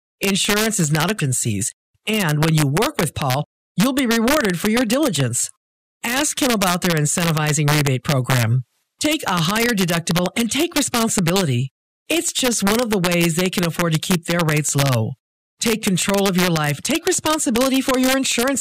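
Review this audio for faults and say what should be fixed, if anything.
Integer overflow runs through the whole speech clip. The gain pushes peaks about 1 dB past full scale. Those samples wrap to the opposite sign. A small fraction of samples, under half a percent, crack sharply on loud syllables. Saturate or limit before integer conversion.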